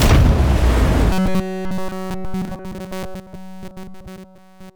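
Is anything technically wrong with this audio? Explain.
Yes. From 1.12 s to 4.76 s there is robotic sound from repeated short buffers. The likely cause is new audio arriving too seldom, so playback keeps looping a slice of about 5 ms. This imposes a fixed 188 Hz buzz onto all of it, a rigid metallic buzz that only loosely follows the original.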